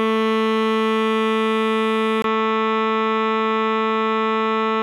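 At 2.22 s the music drops out for about 20 ms. It returns duller and boxier, with nothing above 7.6 kHz and a faint new noise floor well below the music. The level stays roughly the same. The likely cause is an input switched to a poorer device.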